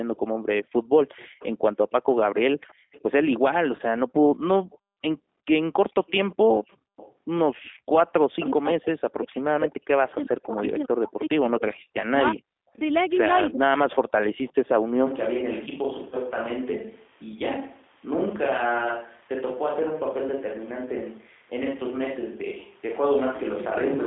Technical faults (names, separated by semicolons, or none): G.729 codec; VoIP packet loss concealed by the speech codec; switch to a distant microphone